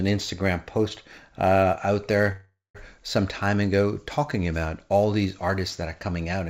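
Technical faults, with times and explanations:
Throughout: sample clock jitter, a few microseconds of converter timing wobble, adds faint roughness around 35 dB below the speech, strongest on loud, bright sounds.
2.32–2.77 s: call audio freeze after "post uh out", likely from delayed packets emptying the jitter buffer. A fading buzz or hiss leads into brief silence, then "some time ago talking" resumes with nothing lost.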